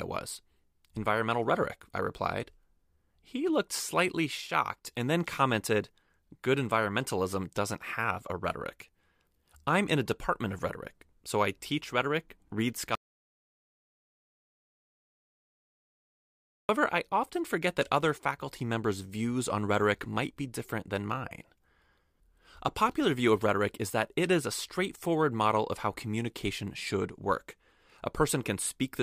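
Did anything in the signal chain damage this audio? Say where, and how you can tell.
Yes. The input device or link likely dropped, so the recorder wrote silence: an audio dropout to silence from 12.95 to 16.69 s, after "I teach rhetoric read", with no room tone.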